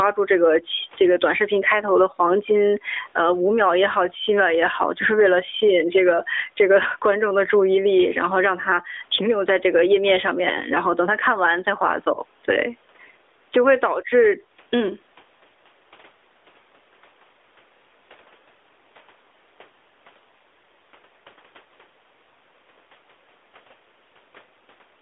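A speech recording that's been through a narrowband mobile call, so it's got that boxed-in telephone band. The main problem is gain pumping all the way through, with a swing of something like 15 dB. That's likely a gain set far too hot for the mic and a fast limiter clamping it back down, which also squashes loud and quiet parts together. Then at about 12.14 s there's a short dip or warble, which sounds like one lost AMR speech frame, roughly 20 ms, where the decoder fills the gap by repeating the last good frame at falling level before the voice comes back, briefly weak or rough.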